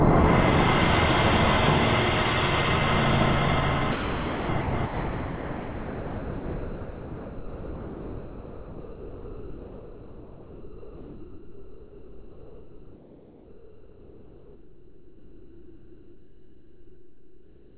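From 3.92 to 4.49 s, 4.61 to 4.73 s, and 4.85 s to the end, the sound gives way to flat, steady noise, likely sound dropped by the voice detector and replaced with comfort noise. On a spectrogram these stretches are a featureless haze up to 4 kHz, and the waveform is a low, even band.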